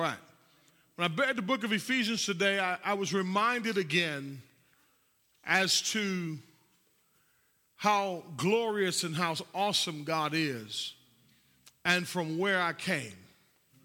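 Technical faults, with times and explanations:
Throughout: resampler restarted on every block. Converting each 10 ms block separately leaves an error at every edge, heard as a 100 Hz buzz that is present only with the speech.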